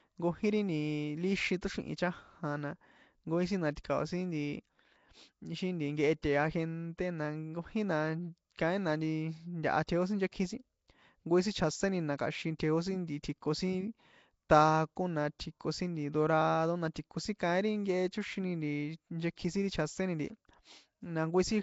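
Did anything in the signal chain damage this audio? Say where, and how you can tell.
Yes. The damage sits at the codec stage and runs through the whole clip: the speech carries a rough, hissy halo and a smeared, underwater quality, and nothing is present above about 7.7 kHz. That pattern points to Nellymoser compression, likely from Flash's old microphone codec running at a rate that fits 32 kbps. It codes short blocks with a fixed, small bit budget, so weaker bands get no bits and are replaced with noise, which produces the hiss and smearing.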